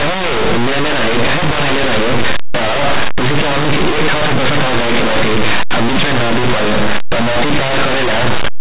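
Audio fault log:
throughout, linear audio read as companded: the plain 8-bit speech is decoded as mu-law codes, so values just on one side of zero swing to the largest outputs while those on the other side stay small, giving very loud, harsh, constant distortion.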